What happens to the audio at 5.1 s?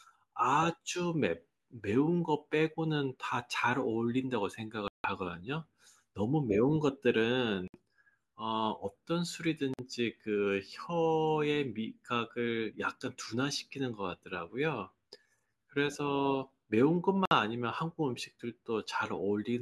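A Bluetooth stall, likely from the headphone buffer running dry while delayed packets were resent, cuts the speech to about 160 ms of silence between 4.88 and 5.07 s.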